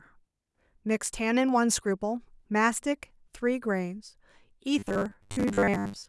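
Speech that turns into robotic sound from repeated short buffers from 4.79 s to the end at 6.09 s: a rigid 100 Hz metallic buzz loosely tracks the words. Its fixed pitch, not a broken-up stutter, likely points to repeated 10 ms buffers replacing most of the audio.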